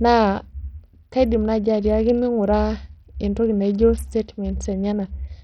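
Throughout the speech, the signal was likely squeezed through Bluetooth SBC compression at a very small bit pool, which fits a 64 kbps stream. Starved upper sub-bands lose their treble, which flickers and drops out, while coarse quantisation leaves heavy gritty noise and aliasing.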